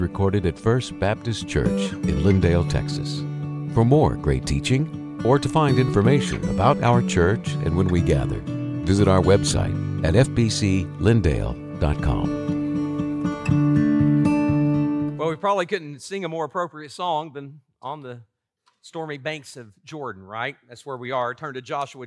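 No technical faults can be heard in this audio.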